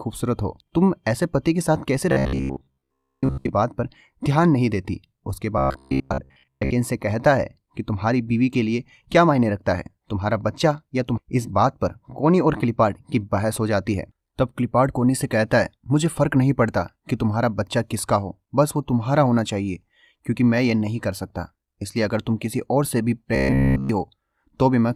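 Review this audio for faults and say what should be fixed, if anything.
Robotic sound from repeated short buffers, at 2.12–3.50 s, 5.58–6.72 s and 23.36–23.89 s: new audio likely arrived too seldom, so playback looped the last 15 ms fragment in place of about 70% of the sound, and of nearly all of it in the final stretch. The result is a metallic 66.8 Hz buzz.

Skip ahead, at 11.17–11.19 s: about a second of audio was discarded while later audio was already waiting, so playback jumps forward with no gap and the two sides are spliced together.

Jitter buffer speed-up, at 11.28–13.01 s: the buffer was still holding more audio than its target, so it trimmed short pitch-period pieces totalling about 100 ms. The sound runs at 106% speed with unchanged pitch.

To prevent these, stabilise packet delivery and give the jitter buffer enough headroom that it neither starves into looping nor overfills and forces skips and catch-up compression.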